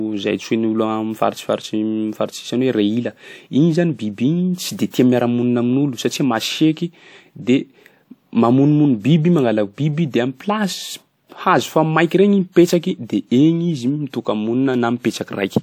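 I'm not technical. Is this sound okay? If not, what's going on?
No. At 4.9 seconds there is pre-echo. The compression smears a short hiss into the 35 milliseconds before a sharp sound, blurring its start.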